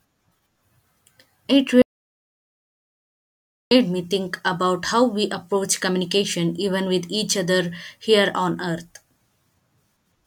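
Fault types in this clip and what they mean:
Audio dropout to silence: the speech cuts off at 1.82 s and returns at 3.71 s on "me think about how", leaving nearly 1.9 s of dead silence with no room tone at all, most likely a lost input or mute while the recording kept writing silence.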